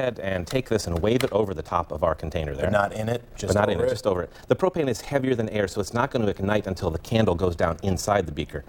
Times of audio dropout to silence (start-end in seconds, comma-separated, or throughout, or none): none